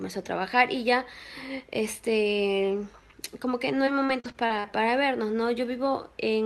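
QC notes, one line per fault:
3.75–4.68 s, repeated packet loss (robotic sound): six short dropouts, longest about 39 ms, each patched by extending prior audio, leaving choppy stretches with pieces missing.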